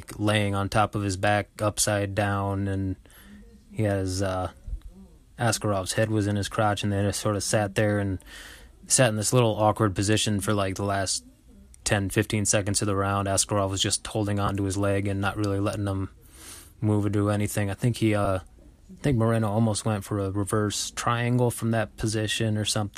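Speech, with lost LE Audio frames at 14.47–14.50 s and 18.25–18.27 s, gaps that fit two and one 10 ms frames. Each becomes a brief noisy smear, concealed by the likely LC3 decoder.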